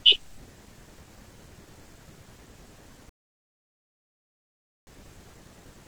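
At 3.09 s the speech cuts abruptly to silence, and at 4.87 s it resumes from exactly the point where it stopped: a rebuffering stall. The player exhausted its downloaded audio and waited about 1.78 s for more to arrive, so nothing is lost but time is added. On a waveform this shows as a flat gap splitting the signal cleanly. A spectrogram shows a blank vertical band with sharp edges on both sides.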